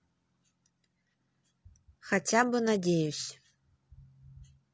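Throughout, the speech sounds rough and grainy, with noise between the harmonics and a dulled top band, likely low-delay AAC compression (AAC-ELD) at around 32 kbps. At 1.12 s and again from 3.23 to 3.31 s, AAC frame loss with concealment leaves smeared, phasey patches where the decoder filled in from the previous spectrum, rather than the clean silent gaps of an ordinary dropout.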